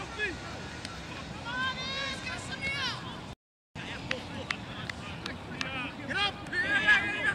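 At 3.33 s the sound cuts to silence in mid-flow and stays silent for 423 ms, resuming at 3.76 s. This is a playback stall: the player likely ran out of buffered data or had its output thread blocked until it recovered.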